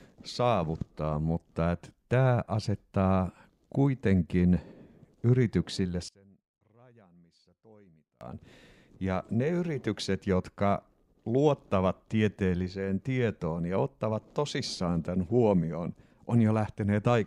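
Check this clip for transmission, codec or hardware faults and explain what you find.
One fault is present in the speech. From 6.09 to 8.21 s, the sound drops by about 29 dB to a faint residue, likely from one channel inverted, cancelling the shared centre content when the channels are summed to mono.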